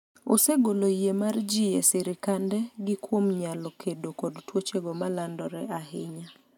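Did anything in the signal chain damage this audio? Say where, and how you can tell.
No, nothing in the chain has left an audible mark on this speech recording: the level, continuity and timing hold steady throughout, with no sign of trouble at any stage from capture to playback.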